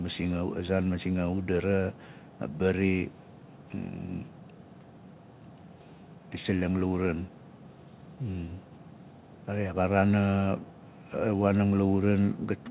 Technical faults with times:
none

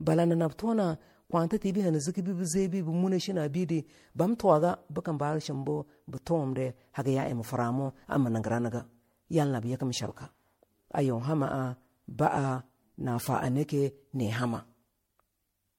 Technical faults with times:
0.00-15.79 generation loss

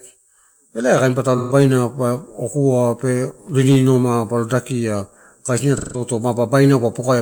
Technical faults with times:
1.37-1.53 AAC frame loss with concealment
5.77-6.01 AAC frame loss with concealment

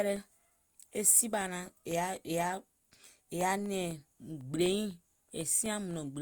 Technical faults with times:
0.16-6.16 periodic USB or driver dropouts

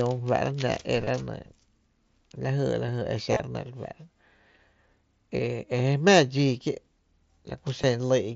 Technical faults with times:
1.05-1.07 concealed Bluetooth headset packet loss
3.32-3.40 concealed Bluetooth headset packet loss
4.58 concealed Bluetooth headset packet loss
6.64 concealed Bluetooth headset packet loss
7.82 concealed Bluetooth headset packet loss

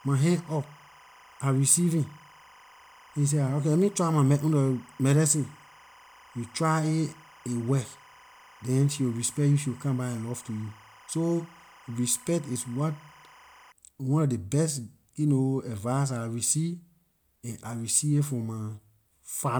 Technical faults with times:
0.00-13.72 timecode bleed

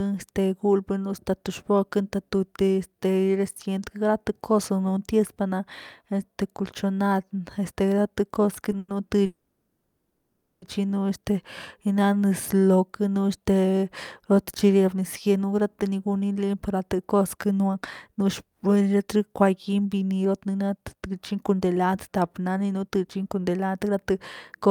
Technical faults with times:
8.78-8.91 call audio freeze
9.26-10.65 call audio freeze
15.26-24.12 jitter buffer speed-up

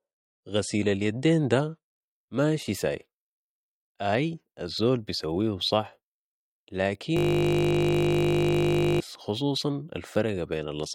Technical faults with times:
0.00-2.00 adaptive stream starting at a low bitrate
7.17-9.00 system hang loop

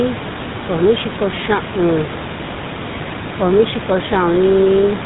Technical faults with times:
0.00-5.05 GSM full-rate codec

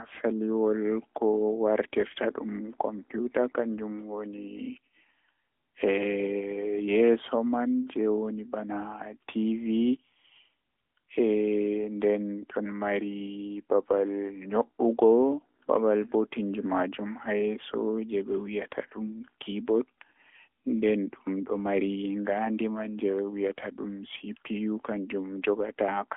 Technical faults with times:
0.00-26.17 AMR narrowband mobile codec

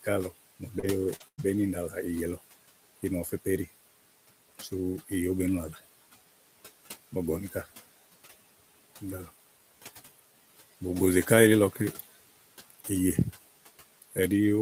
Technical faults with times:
0.00-14.61 noise suppressor artifacts
0.03-3.46 speech cut by the noise suppressor
0.79-1.23 short concealed packet loss
0.83-0.85 lost packet rebuilt from error correction
1.20-1.40 lost packet rebuilt from error correction
1.28-1.41 burst of packet loss
4.55-5.78 speech cut by the noise suppressor
11.72-12.90 speech cut by the noise suppressor
14.01-14.17 speech cut by the noise suppressor

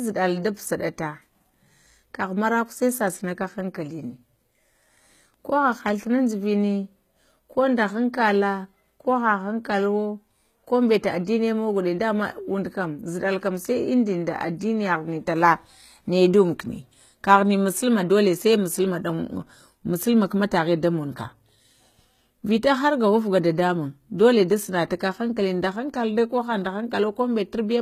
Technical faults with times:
0.00-27.82 HE-AAC compression

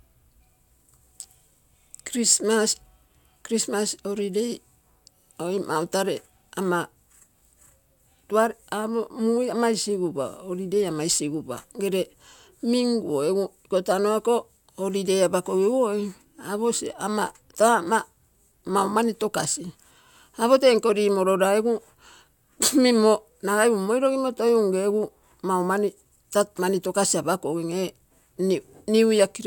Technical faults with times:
none

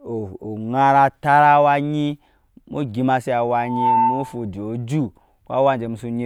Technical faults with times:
3.60-4.48 loudspeaker feedback squeal

